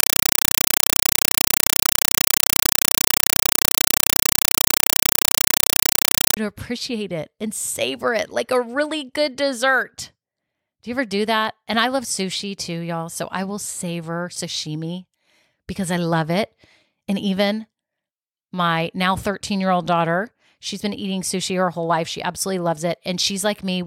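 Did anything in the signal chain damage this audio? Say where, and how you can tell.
Yes. From 0.0 to 6.37 s the speech is replaced by a compressed stream played as audio, a fault at the digital output or link stage. Loud, harsh static chatters at about 31 bursts per second, each burst roughly 5.3 ms of noise followed by silence. That rhythm matches AC-3 frames sent as raw PCM instead of being decoded. Broadband hiss or a bad cable would give steady noise. This noise is gated into bursts at a fixed rate.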